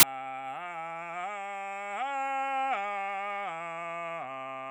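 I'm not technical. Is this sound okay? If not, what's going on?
No, not quite. Right at the start of this music, from 0 to about 0.03 s, there's a sharp burst of loud hiss. That's file tags played as audio: the embedded cover picture got read as sound, so its packed data comes out as static.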